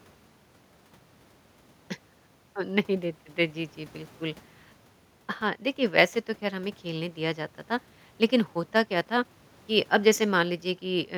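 No technical faults can be heard anywhere here.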